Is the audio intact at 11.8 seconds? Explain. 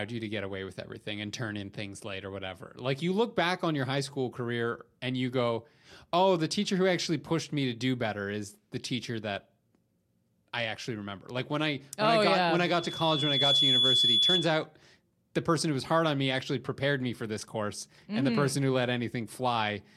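Yes, the audio at 11.8 seconds is intact, with no audible fault at that moment.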